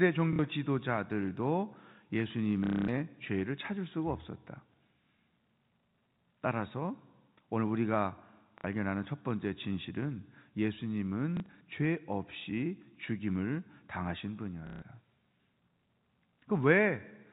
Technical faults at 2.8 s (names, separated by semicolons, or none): packet loss with last packet repeated